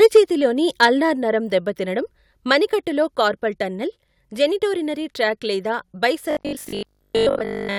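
Speech opens with a harsh, crackly edge from 0.02 to 0.19 s and again from 0.82 to 0.85 s, where the loudest moments sound flattened and gritty. This is microphone overload. The input level was likely set too high, so peaks about 3 dB and about 4 dB past the converter's limit had their tops sliced off. That affected roughly 7 percent of samples in the first stretch and around 3 percent in the second. At 0.17 s, right at the end of the first distorted burst, and again at 1.17 s, the whole sound, voice and background together, drops abruptly by about 2 dB. That is the microphone volume being stepped down, most likely by automatic gain control in the call software, which reacted to the clipping by lowering the device's input level in a single jump rather than gradually. From 6.31 s to the end of the clip at 7.79 s, the speech turns into a stiff, metallic drone locked to a steady 50 Hz buzz while still loosely tracking the speech's shape. 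This is robotic sound from repeated short buffers. Audio likely arrived too infrequently, and the gaps were filled by looping the last chunk, which fits a buffer of about 20 ms. Most of this stretch is repeated material rather than real audio.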